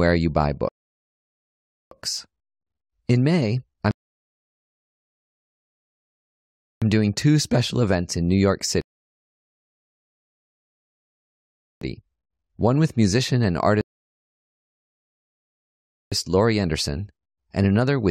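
Speech that halts four times with rebuffering stalls. The player runs out of downloaded audio and goes silent until more arrives. Then it picks up at the exact point it stopped. The gaps fall at 0.69 to 1.92 s, 3.91 to 6.82 s, 8.81 to 11.81 s, and 13.81 to 16.12 s. They last 1.2 s, 2.9 s, 3.0 s and 2.3 s. No speech is skipped. Each stall simply adds dead time to the playback.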